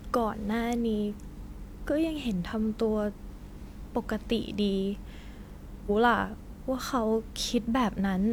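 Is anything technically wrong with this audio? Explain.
Yes. From 5.86 to 5.91 s the speech breaks briefly from damaged data in the compressed stream: corrupted bytes make the decoder misread frames until it resyncs.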